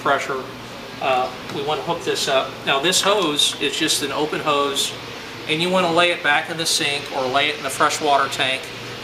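No technical faults can be heard anywhere in the audio; nothing interrupts or disturbs it.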